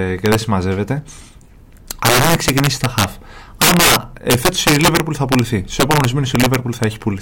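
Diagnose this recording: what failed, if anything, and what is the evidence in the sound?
Integer overflow in the gain or sample-format stage: driven about 14 dB too hot, the loudest speech peaks, a few percent of samples, wrap to the opposite sign throughout, giving harsh cracks.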